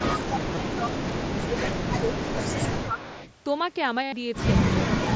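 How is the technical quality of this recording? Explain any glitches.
It's a pretty rough call recording, band-limited to 8 kHz by the mSBC headset link, with three kinds of trouble stacked up in the first few seconds.

Echo leak, 0.19–1.79 s and 2.12–3.34 s: a copy of the audio trails about 0.27 s behind, roughly 15 dB down, likely a speakerphone on one side whose canceller let some through.

Speech suppressed in double talk, 0.24–1.17 s, 1.48–2.11 s and 2.58–3.0 s: the level ducks by up to about 15 dB, then about 10 dB, likely the canceller clamping down while both sides overlapped.

Concealed Bluetooth headset packet loss, at 0.55 s and 4.03–4.13 s: the first is a brief 15 ms gap of two lost frames. The second is about 0.1 s of buzzy, held tone where the receiver repeated recent waveform to fill the gap.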